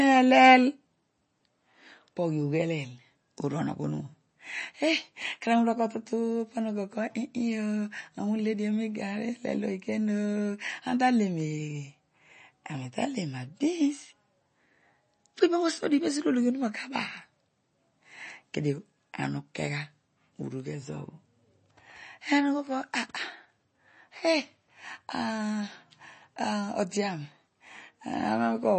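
From start to finish the speech carries plainly audible MP3 compression damage, likely from encoding at a low bitrate. Nothing remains above about 8.3 kHz, so the top end sounds dull and capped. That hard ceiling fits a rate around 32 kbps. Starved of bits, the encoder drops weak frequency lines, which flicker in and out between frames. This gives a watery, swirling texture. S sounds turn metallic and chirpy. Consonant onsets smear.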